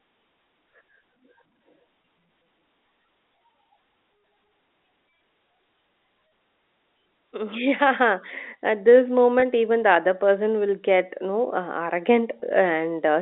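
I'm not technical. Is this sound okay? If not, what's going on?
No. The speech has two problems.

At 2.02, 9.4 and 12.4 seconds there is a tiny hitch: for a split second the voice seems to hold and buzz instead of moving on. This is packet loss with pitch repetition. Each time, one small piece of the audio, 20 ms long, went missing on its way across the network. To hide the gap, the receiving end replayed the last bit of voice it had, which causes that brief held, buzzy sound.

From 7.31 to 12.04 seconds the whole recording slowly gets louder, and the voice and any background sound swell together. This is automatic gain rising: a built-in volume control decided the sound was too quiet and kept turning it up gradually over those few seconds. It is a steady climb rather than a sudden jump, so it can feel like the speaker is drifting closer. The narrow, phone-like tone comes from ordinary telephone coding and is not a fault here.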